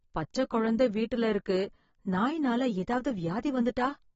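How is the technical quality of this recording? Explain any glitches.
The quality is poor. Codec damage is plainly audible from start to finish. Nothing is heard above 7.7 kHz, so the speech sounds dull and smeared, with a fizzy warble on sibilants. The likely cause is AAC compression at a low bitrate. It lowers the cut-off to save bits and coarsely quantises the remaining spectrum.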